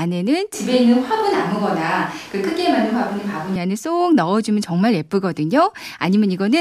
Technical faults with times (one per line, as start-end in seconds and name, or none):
0.54-3.56 switch to a distant microphone